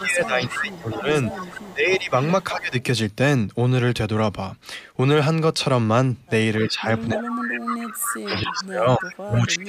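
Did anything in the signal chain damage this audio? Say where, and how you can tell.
Yes, in the call processing. From 0.0 to 1.09 s and 1.71 to 2.74 s the speech dips by about 15 dB, and from 6.66 s to the end it sinks by about 25 dB. That's speech suppressed in double talk, likely the echo canceller ducking its own talker along with the echo while both ends talk.

There's also echo leak: a copy of the speech trailing 281 ms behind, from 0.0 to 2.83 s at about 15 dB down, then 6.69 to 7.41 s and 7.94 to 9.49 s at about 10 dB down. Likely one side's canceller let loudspeaker pickup slip back.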